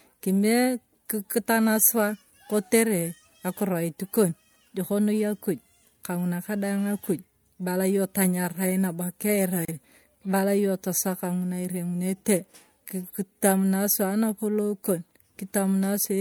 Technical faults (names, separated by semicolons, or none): gap at a join of encoded pieces